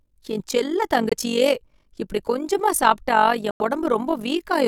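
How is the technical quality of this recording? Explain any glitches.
The technical quality is poor: the speech carries a constant rough flutter and is twice interrupted by short silences.

Overlap-add ripple runs through the whole clip. The audio was evidently split into windowed frames and reassembled with an overlap whose gains don't add up evenly, so the level swells and dips by about 11 dB once per frame, at roughly 50 times a second. That steady modulation gives the speech a fast, rough tremolo.

Two dropouts cut the sound to silence, from 1.09 to 1.14 s (about 44 ms) and from 3.51 to 3.62 s (about 110 ms). The likely cause is a Bluetooth dropout, where audio packets reached the headphones too late and were discarded. After each gap the speech picks up further along, as though it kept playing through the hole. The second gap is the longer of the two.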